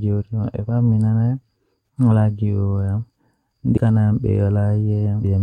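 A break at 3.76 s and another from 5.23 to 5.25 s mark jumps in the speech. The first drops roughly 150 ms and the second nearly three quarters of a second. Compressed frames were skipped, either missing or rejected as damaged.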